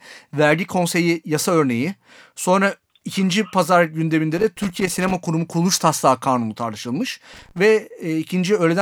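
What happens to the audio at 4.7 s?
At 4.7 s the speech is inside a burst of loose connector crackle running from 4.38 to 5.15 s, just after "ikinci pazar". A worn or dirty contact is making and breaking, chopping the signal into an irregular scratchy crackle, with pops from any DC on the line.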